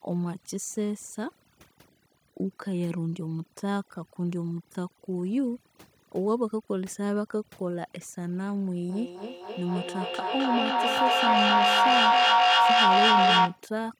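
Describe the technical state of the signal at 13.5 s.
At 13.5 s the background has dropped and broken into scattered twinkling specks. That is overdone noise removal, present for the whole clip: the reducer is set so hard that it cuts individual frequency bands it judges close to noise, taking quiet parts of the voice with them.

Over this, every word comes back about every third of a second, each return thinner and more ringing. By this point the repeats are piling up rather than fading, peaking about 8 dB above the speech. This is feedback echo between two devices, running from 8.9 s to 13.67 s. A second device in the same room replays the far microphone's sound, that microphone captures it again, and neither echo canceller removes audio played by the other unit.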